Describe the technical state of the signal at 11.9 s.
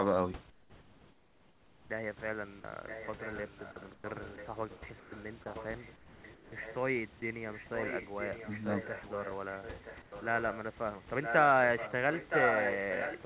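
At 11.9 s there is a short echo leak, from 11.77 to 11.93 s: a faint, delayed copy of the speech, roughly 10 dB below it and trailing by about 0.97 s, likely residue the far end's echo canceller failed to remove and sent back.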